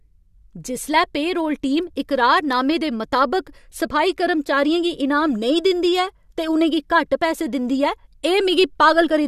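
No technical faults can be heard anywhere in the recording.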